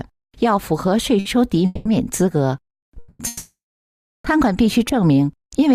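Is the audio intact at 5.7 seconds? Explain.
Yes, the audio is intact at 5.7 seconds, with no fault audible at that moment.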